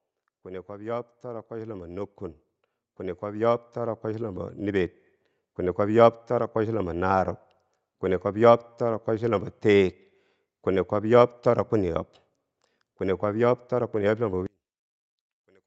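The clip is speech carried over a call path, with nothing above 8 kHz, and it shows two kinds of fault. Automatic gain rising occurs twice: from 0.66 to 2.22 s the level climbs by 6 dB, and from 3.2 to 5.87 s by 8 dB. In each case the control judged the input too quiet and raised its gain step by step. What separates this from a talker simply getting louder is that the background noise swells right along with the voice over those one- to three-second ramps. From 14.46 s to the end at 15.66 s the sound collapses by about 34 dB, leaving only a faint residue. That residue is what distinguishes it from a dropout or mute, where nothing would remain. The likely cause is one channel inverted in polarity, so the centred content cancels when the two channels are summed to mono and only their small differences survive.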